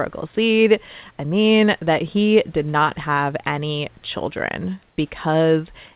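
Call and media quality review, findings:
Comfort noise in place of the background, 4.88–4.98 s, after "not have any children": 100 ms of smooth, featureless hiss at unchanged level; uniform grey spectrogram patch; likely DTX comfort-noise fill.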